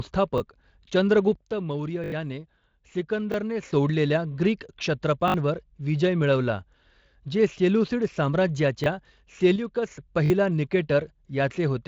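Speech, carried through a Speex codec with light coding roughness and nothing above 7.6 kHz, has two faults. A repeated buffer stutters at 0.38, 2.04–2.12, 3.32, 5.28–5.34, 8.84 and 10.26–10.30 s. The same 20 ms slice replays with hard joins, which fits a 20 ms buffer. Unlike a dropout, there is no silent gap; the slice is duplicated instead. Sudden gain jumps drop the level by about 8 dB from 1.36 to 3.63 s and by about 6 dB from 9.56 to 9.91 s. The background noise steps down and back together with the speech. That instant, unramped change, unlike a compressor's smooth pumping, points to a likely digital gain setting applied without a ramp.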